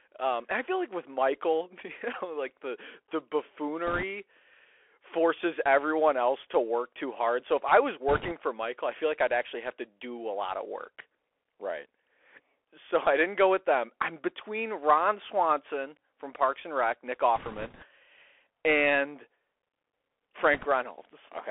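The whole recording runs through a Bluetooth CVSD headset codec, and the damage is plain from the first second. The sound is squeezed into a phone-style band of about 300 Hz to 3.4 kHz, consistent with 64 kbps CVSD. Because that codec sends one up-or-down bit per sample with an adapting step, loud high-frequency sounds outrun it and smear. The s sounds come out scratchy, and a fine granular hiss sits under the speech.

On top of that there are four short bursts of bit errors on the Bluetooth voice link: 3.87 to 4.03 s, 8.09 to 8.33 s right after "if I was", 17.36 to 17.85 s, and 20.54 to 20.66 s. Flipped bits in CVSD each nudge the waveform only slightly and then fade out, so instead of clicks you get a rushing, crackly layer of noise. The error rate is a few percent, a bit higher in the 8 s burst. The 17.4 s stretch lasts longest, about half a second.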